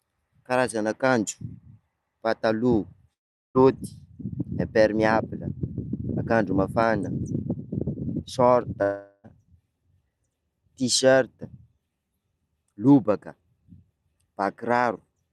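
A speech clip, carried over an Opus call path whose top end stops around 12 kHz. It has two gaps that sound like a long network dropout: at 3.13 to 3.58 s and 8.83 to 9.27 s, about 0.42 s of speech vanishes, the first left almost entirely silent and the second papered over by a fading buzz or hiss fill before the audio picks up again further on, likely packets that never arrived.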